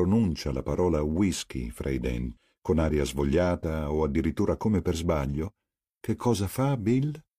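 At 2.33 to 2.37 s, damaged data in a compressed stream produces a short glitch. The decoder misreads corrupted frames, loses sync and hunts for the next valid header. On a spectrogram this appears as a brief smeared vertical block; the waveform shows an abrupt discontinuity.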